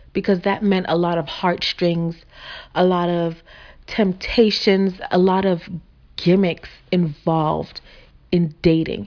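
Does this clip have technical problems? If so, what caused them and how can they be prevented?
No, nothing in this speech recording stood out as a technical problem on listening, so there is no cause to trace and nothing to prevent.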